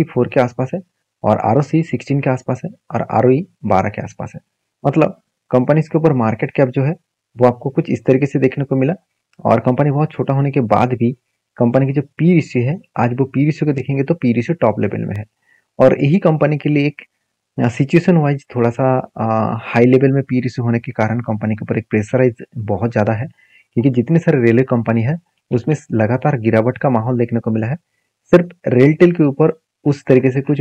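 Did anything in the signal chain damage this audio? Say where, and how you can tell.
Yes: a block of digital silence at 15.16 s, a tick lasting under a millisecond, which fits a 32-sample buffer left unfilled. The hard edges, unlike analogue crackle, point to the driver or buffer stage.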